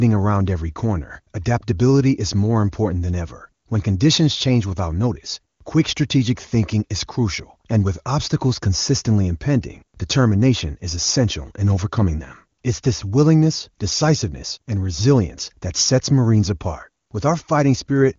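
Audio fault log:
No fault to log.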